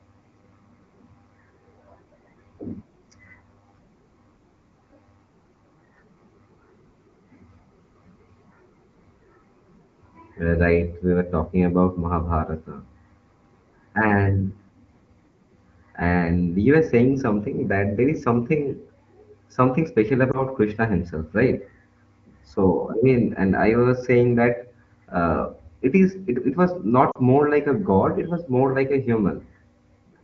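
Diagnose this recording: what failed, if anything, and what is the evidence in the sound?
Lost AMR speech frames, on the radio link: a brief dip or warble at 20.31–20.41 s, fitting one corrupted frame, and a longer gap dropping to near silence at 27.11–27.18 s, suggesting two consecutive frames. The decoder repeated earlier pitch and vocal tract settings with falling gain.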